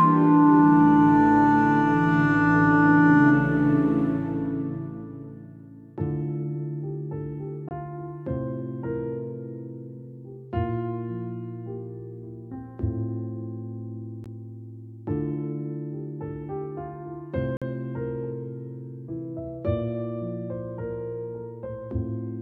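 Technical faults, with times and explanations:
7.69 to 17.62 s, block of digital silence: the sound drops to silence with no fade at 7.69 to 7.71 s (23 ms, which fits a 1024-sample buffer), at 14.24 s (15 ms), and at 17.57 to 17.62 s (46 ms, which fits a 2048-sample buffer). The buffers likely weren't filled in time. The shortest gap registers as a tick and the longest as a brief hole. Unlike a fade-out dropout or concealed packet loss, there's dead silence between two hard edges.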